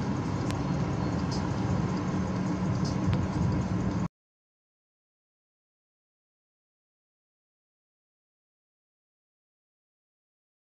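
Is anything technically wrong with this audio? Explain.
Yes, there are two loud pops, at about 0.51 s and 3.14 s. Each is a single sharp hit lasting around 20 ms, the first roughly 15 dB over the sound and the second a bit softer, with the audio continuing underneath. The likely cause is a sudden voltage spike, from a plug, a switch or static, getting into the signal path.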